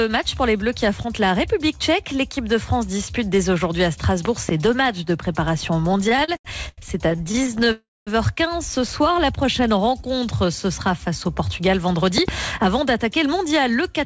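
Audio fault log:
4.25–4.51 s, loud pop: two sharp pops about 15 dB above the sound, likely a voltage pulse from a switch or static; vertical broadband lines with tall waveform spikes.
5.92–7.68 s, repeated stalls (stutter): 23 brief gaps, longest 89 ms, padded by continuing the last sound and totalling 436 ms, roughly a quarter of the span; repeated smeared patches.
7.72–8.09 s, call audio freeze: a 348 ms hold, likely a packet delay, where the last sound buzzes and fades, then 210 ms of silence; flat envelope, then blank spectrogram.
9.01–10.47 s, jitter buffer slow-down: repeated pitch periods add 115 ms, so playback runs at 92% speed, same pitch; stretched harmonics, evenly repeated waveform cycles.
12.18–12.31 s, loud pop: another pair of pops about 15 dB above the sound, likely from the same kind of pulse; twin spikes, full-height vertical streaks.
12.80–14.06 s, jitter buffer speed-up: short pitch-period chunks removed, about 50 ms in total, giving 104% speed at unchanged pitch; slightly compressed spectrogram features, subtle waveform splices.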